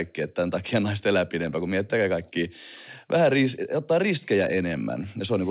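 Nothing goes wrong in this one: the speech arrives over a call path that stops at 4 kHz, which points to a G.711 A-law link at 64 kbps, and there's no trouble to report along the way.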